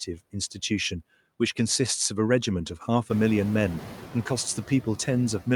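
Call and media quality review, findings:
Noise suppressor artifacts, whole clip: background pumps down about 13 dB between phrases and swells back under speech. The suppressor is gating bands frame by frame.

Noise suppressor catching up, 3.09–4.07 s: room noise jumps about 15 dB around 3 s and comes through with only about 5 dB of reduction at first. The noise estimate lags, then the background sinks after roughly 0.98 s of adapting.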